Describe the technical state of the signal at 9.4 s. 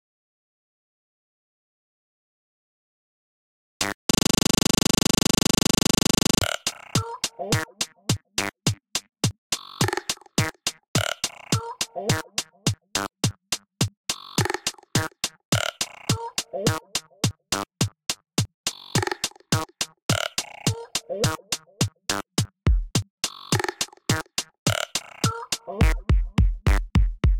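The signal at 9.4 s is intact, with no audible technical fault at that point.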